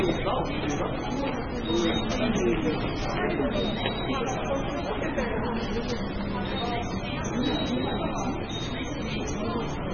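It's a short clip of sounds with MP3 compression throughout: nothing above 6.6 kHz, plus swirly, watery smearing, likely from a very low bitrate around 15 kbps.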